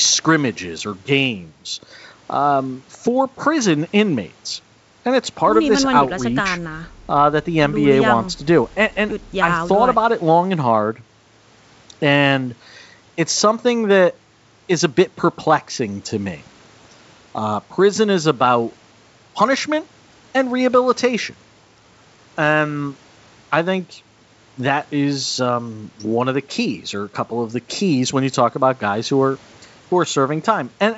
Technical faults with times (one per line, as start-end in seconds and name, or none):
none